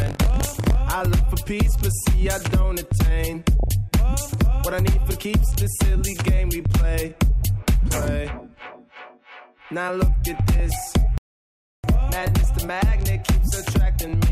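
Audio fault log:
throughout: MP2 compression, dull and granular with a gurgling edge, likely from MPEG Layer II at 80 kbps starving upper sub-bands of bits.
0.00–0.80 s: buffer tearing, a robotic buzz at 46.9 Hz, fitting a 1024-sample buffer, where a small slice of each period repeats audio from about 40 ms earlier.
3.60–3.69 s, 10.60–10.71 s, 12.25–12.44 s, 14.01 s: DAB burbling, short blips of noise in single sub-bands as bit errors corrupt samples in the MP2 data.
11.18–11.84 s: playback stall, the sound cuts out for 0.66 s, likely from the player running short of data or being blocked.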